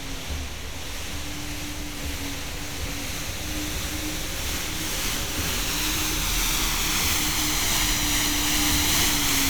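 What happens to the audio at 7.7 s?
Nothing goes wrong at 7.7 s; the sound continues intact through that moment.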